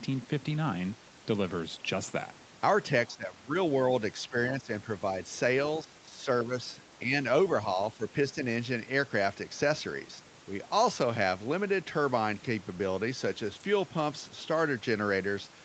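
The speech dips three times, at 3.08 to 3.54 s, 4.3 to 4.7 s and 5.83 to 6.52 s, by roughly 10 to 15 dB. This is likely speech suppressed in double talk, with the echo canceller ducking this talker while the far side spoke.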